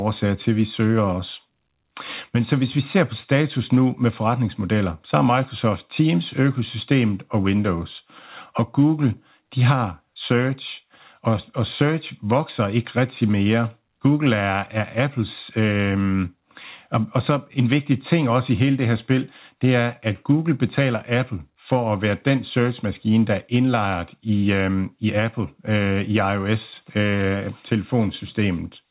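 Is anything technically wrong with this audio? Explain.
No, nothing is technically wrong: the speech came through a call path whose narrowband codec leaves nothing above 4 kHz, and that ceiling is how such a connection normally behaves.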